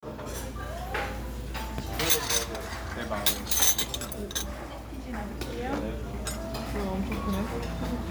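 The clip is a recording of sounds, and nothing is technically wrong with it.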